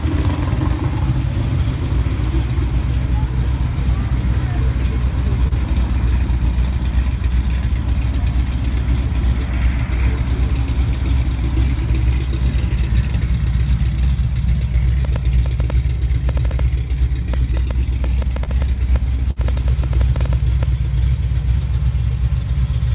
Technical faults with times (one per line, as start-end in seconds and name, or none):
5.48-5.54 short concealed packet loss
15.05-20.64 train of clicks
18.44-18.50 short concealed packet loss
19.31-19.39 burst of packet loss